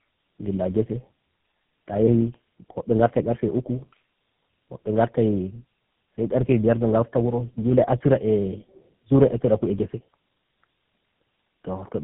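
From start to finish the speech is rough, muffled and warbly, with a gritty, watery texture and nothing above about 3.7 kHz. This is tandem speech coding: the call appears to have been decoded and re-encoded by about three low-rate speech codecs in a row, such as AMR-NB, G.729A and GSM full rate. Each coder models an input already distorted by the one before, so the errors pile up beyond what any single link would leave.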